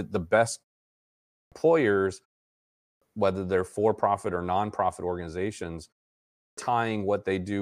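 Clipped starts after a pause at 1.12, 2.6 and 6.21 s: the output device dozes through each short gap and wakes late, chopping roughly 0.4 s off the front of the speech.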